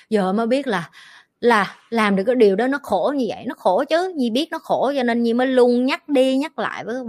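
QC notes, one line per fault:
No faults found in the speech on this pass.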